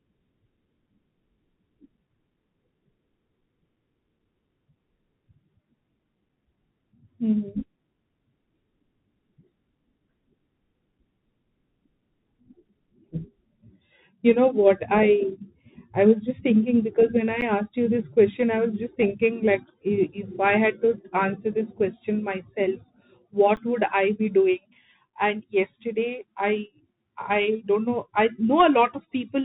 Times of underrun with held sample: 17.41, 23.56

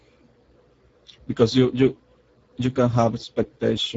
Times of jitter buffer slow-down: none

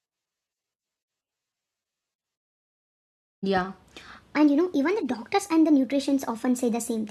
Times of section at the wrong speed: 4.36-7.10

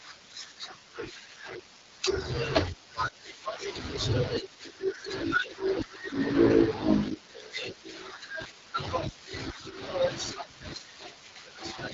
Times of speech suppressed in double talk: none

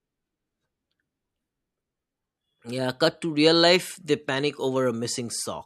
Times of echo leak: none

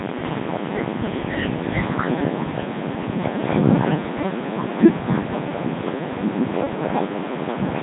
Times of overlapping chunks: none

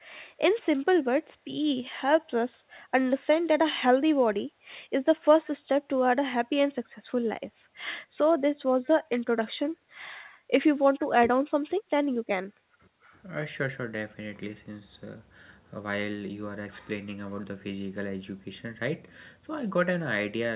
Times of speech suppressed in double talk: 11.17-11.26

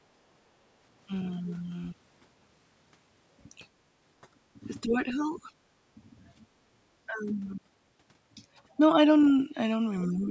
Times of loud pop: none

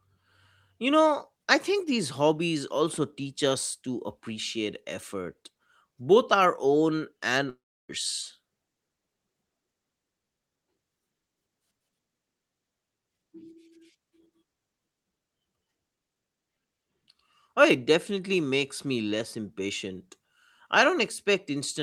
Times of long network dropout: 7.49-7.91

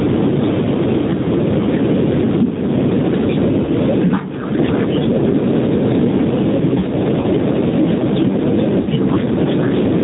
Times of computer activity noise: none

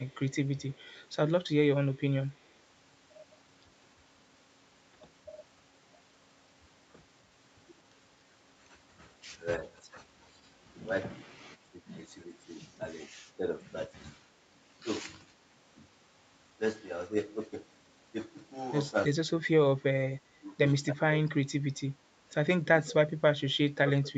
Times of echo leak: 0.08-0.16, 0.74-1.01

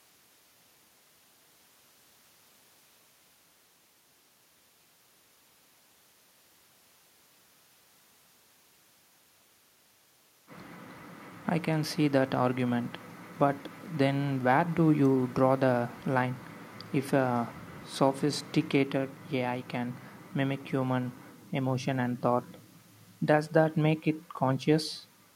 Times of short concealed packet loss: none

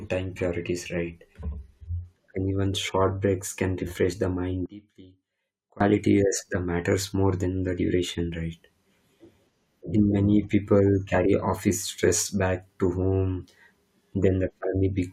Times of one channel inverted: 4.66-5.80

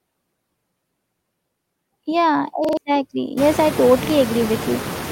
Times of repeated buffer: 0.60-0.64, 2.65-2.77, 4.05-4.10

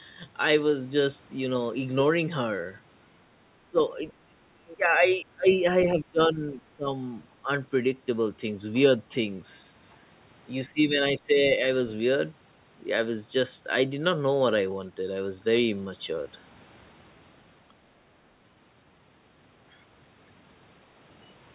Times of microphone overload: none

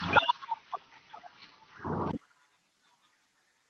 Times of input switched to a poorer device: 0.00-2.13

